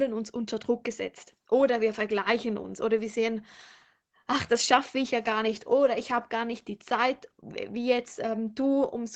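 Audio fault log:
No faults found; the speech carries nothing above 8 kHz, as expected from the call microphone processing and the Opus-coded WebRTC call path, both working normally.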